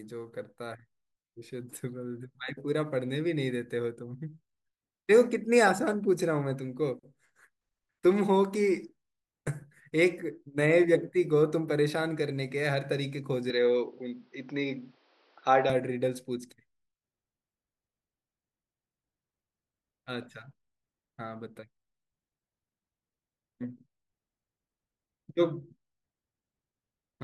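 At 13.50 s the speech abruptly turns duller, with nothing above 6 kHz and faint new background noise, while the level stays much the same and no gap marks the change; full bandwidth returns at 15.70 s. This likely reflects the input switched to a poorer device.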